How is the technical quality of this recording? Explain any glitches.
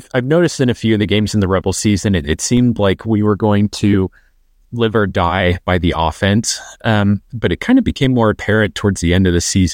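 Two glitches stand out, both DC steps. At 2.57 s, between "season it it" and "like we were going", and again at 8.04 s, just after "but it kind of", the signal's zero line abruptly jumps by about -14 dBFS. A 20 Hz high-pass then bleeds the offset away, so each jump is heard as a short, low thump beneath the continuing speech.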